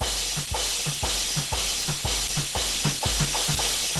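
Throughout, the music sounds muffled, hoarse and grainy, with nothing above 12 kHz. The likely cause is Opus compression in hybrid mode, at a rate that fits about 16 kbps. From 0.07 s to 3.82 s, periodic USB or driver dropouts skip a tiny sliver of audio every 0.125 s, about thirty times, giving regular ticks.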